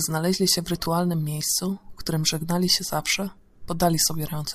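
At 0.85 s and again at 3.52 s there's a brief blip of lost LE Audio frames: about 10 ms each, which fits one dropped frame apiece. The LC3 decoder fills each gap by reusing the last spectrum with random signs, so the speech turns briefly into a noisy smear. Under it the light lossy compression does its job quietly.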